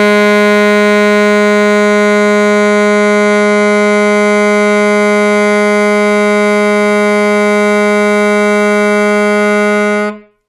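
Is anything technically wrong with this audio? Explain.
No, nothing stood out as technically wrong on listening to this music.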